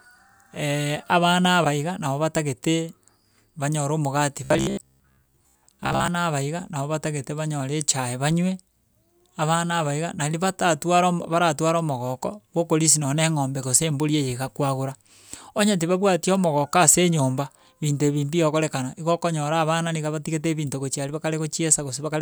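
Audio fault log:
4.44 to 6.08 s, robotic sound from repeated short buffers: the speech turns into a stiff, metallic buzz pitched at 66.8 Hz that still loosely tracks the syllables. Fresh audio is likely arriving too slowly, so playback keeps looping the most recent slice of about 15 ms, whose length sets that fixed buzz pitch, while the real signal in between is dropped. Roughly two thirds or more of this stretch is repeated material.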